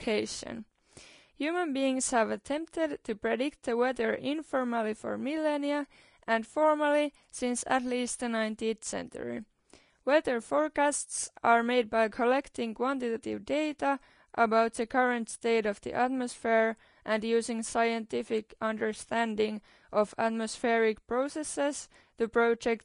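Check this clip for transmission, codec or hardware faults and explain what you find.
One codec fault runs through the whole speech clip. Likely Vorbis compression at a low rate, around 35 kbps, cut everything above 10.6 kHz and coarsely quantised the treble, leaving hissy, grainy sibilants and blurred consonant attacks.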